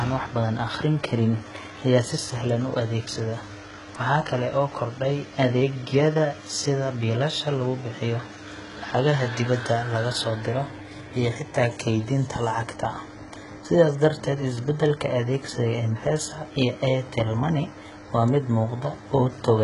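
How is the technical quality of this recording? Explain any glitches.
The technical quality is poor, with heavy codec damage across the whole speech clip. HE-AAC compression, throughout: the encoder likely kept only the lower spectrum and synthesised the treble by copying lower bands upward, fitting a very low bitrate near 12 kbps. Nothing reaches above 11.1 kHz, and s sounds come out gritty, metallic and lispy.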